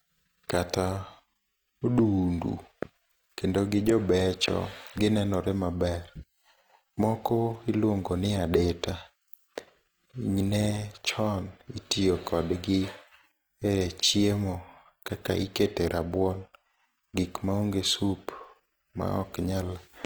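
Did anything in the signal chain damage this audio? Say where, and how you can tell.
Yes: Opus compression throughout, at the codec stage. The speech sounds rough and grainy, not swirly, which points to CELT filling starved bands, likely at a low rate near 24 kbps.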